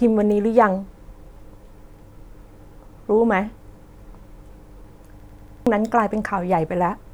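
At 5.20 s the speech locks into a system hang loop that lasts until 5.67 s. The machine or its audio driver stalled while the sound hardware kept replaying its ring buffer, so one 93 ms slice, which fits a 4096-sample buffer, repeats five times at about 10.8 Hz. The result is a machine-gun stutter, and roughly half a second of speech is lost. Unlike a dropout or jitter glitch, each repeat is an identical copy rather than silence or varied fragments.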